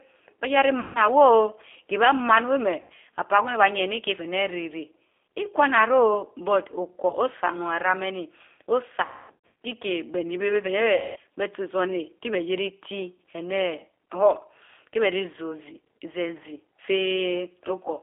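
G.729 codec throughout this speech recording: an 8 kbit/s vocal-tract-and-pulse model limits the line to about 300 Hz–3.5 kHz, giving a plainly rough, synthetic edge. VoIP packet loss concealed by the speech codec occurs at 0.80, 2.81, 7.09, 9.05 (just before "kiikeh beh ni") and 10.95 s, where the decoder stretched earlier speech into a fading buzz or noise, covering 30 to 480 ms of missing audio.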